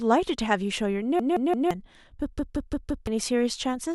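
New audio twice failed to arrive in time, so the device replayed its last 0.17 s buffer, which fits an 8192-sample size. This repeated buffer stutters four times from 1.20 to 1.71 s and five times from 2.39 to 3.07 s, with hard joins, losing roughly half a second and 0.7 s of speech.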